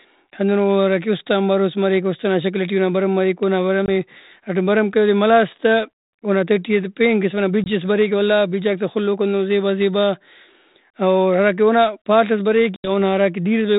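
Three hard-edged gaps cut the speech, each followed by a brief, slightly distorted restart: at 3.86 s, 20 ms just before "ہراٹائم بھرم کرے اودے"; at 7.64 s, 20 ms between "اسہ پین قسم ئنا" and "ئس بریک ولا"; and at 12.76 s, 80 ms after "پال ئس". This is packet loss on an ADPCM call: roughly one, one, then about four packets were dropped and filled with silence. The decoder's adaptive predictor and step size then lost sync with the sender's and took a moment to catch up.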